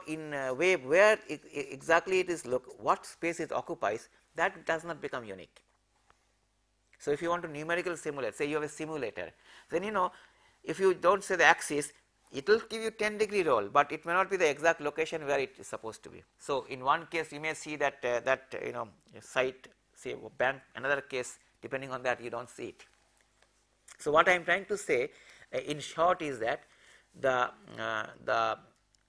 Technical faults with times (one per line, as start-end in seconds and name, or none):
none